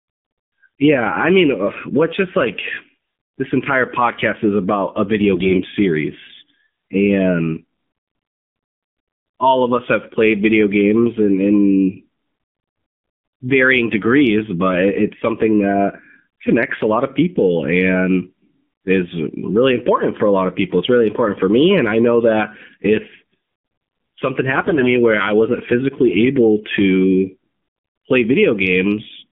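Throughout, an AMR narrowband mobile codec squeezes the speech into a 150 Hz to 3.4 kHz band, and its low bit rate, plausibly around 7.4 kbps, leaves the voice plainly buzzy and synthetic. From 5.34 to 5.59 s, after "is about a video", and again from 24.56 to 24.90 s, just before "where I wasn't physically", AMR bit errors corrupt a few percent of bits in the weakly protected part of each frame. The excitation pulses land wrongly, so the voice keeps its pitch but turns hoarse and gargly.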